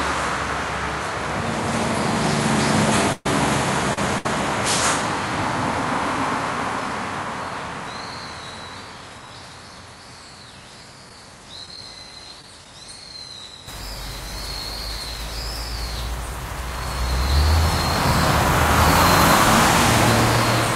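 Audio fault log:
0.00–13.68 s, input switched to a poorer device: The audio sounds dull and narrow, with nothing above 11.4 kHz. It sits roughly 10 dB lower and carries a faint noise floor, some 40 dB under the signal. At 13.68 s it clears and brightens at once, with no silence at the change. The likely cause is the input moving off a narrower, noisier microphone or headset profile onto the better one.
3.12–4.26 s, repeated stalls (stutter): The sound catches and drags three times. Packets reached the receiver too slowly, so its buffer ran dry. Each time it stretched the last sound to bridge the wait, 234 ms in all, the longest stall 129 ms. That is about a fifth of this stretch. No audio is lost, but the timing lurches and smears where each hold occurs.
11.09–12.66 s, scattered short gaps: About five tiny holes appear, each around 10 ms. Single packets went missing here and there, and the receiver filled each by carrying on the last sound. 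About 50 ms of audio is lost altogether, only a few percent of the stretch. The gaps are heard as brief ticks and small hiccups scattered through the passage, not a sustained break.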